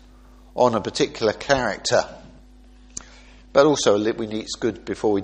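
An adaptive stream at a lower bitrate takes over at 1.00 s and runs to the end of the audio. The switch is abrupt but gapless: treble vanishes above 13 kHz, and coding artefacts thicken as the encoder, starved of data, discards high-frequency detail. The character of the loss fits a player that stepped down from roughly 128 to 32 kbit/s MP3 when its connection slowed, then never recovered within the clip.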